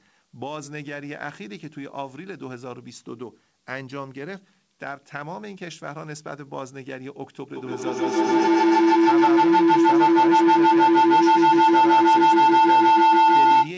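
From 7.56 s to the end, a piercing tone near 1 kHz swells and pulses about every 150 ms, peaking about 17 dB above the speech. This is feedback howl: the microphone-to-loudspeaker loop between two nearby devices gains level on every pass instead of decaying.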